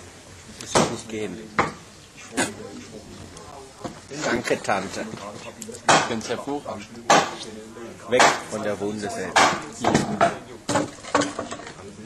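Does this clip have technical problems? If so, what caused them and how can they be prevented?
Yes, there are CD scratch ticks from about 2.39 to 5.20 s: eleven short clicks, roughly four a second and none longer than around 10 ms, where a scratch defeats error correction once per disc turn. Cleaning or replacing the disc, or ripping with a secure-mode ripper, prevents it.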